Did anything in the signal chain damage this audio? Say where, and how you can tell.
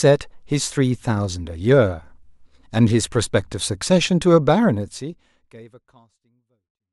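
No, nothing in the signal chain damaged this speech. The level eases down in a smooth fade-out from about four and a half seconds until it ends at 6.93 s, a deliberate editing move with no click or hard edge at the close.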